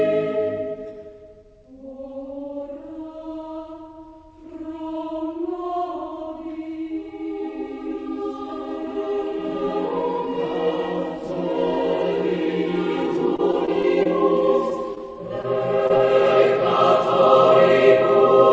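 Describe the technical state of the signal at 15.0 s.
At 15.0 s the signal shows two back-to-back faults. First, from 14.95 to 14.98 s, there is a short concealed packet loss. About 20 ms of audio never reached the decoder in time, and the receiver bridged the gap by extrapolating the preceding sound for roughly 12 ms before crossfading back into real decoded audio. It is heard as a brief smear or wobble where a fraction of the original sound is simply absent.

Immediately after, from 14.98 to 15.02 s, comes a short stall from a late packet. The next packet arrived late, the jitter buffer ran dry, and the receiver stretched the last sound by about 19 ms until data resumed. It then continued from the same point, so nothing further is lost, but the sound hangs slightly too long with a faint buzz or dip. The overall delay shifts by about 19 ms. Throughout, the band stops at 8 kHz, which fits a wideband call codec such as G.722.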